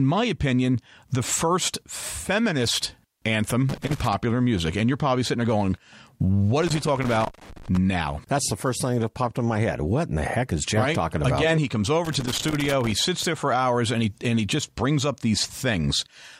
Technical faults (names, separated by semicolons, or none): loose connector crackle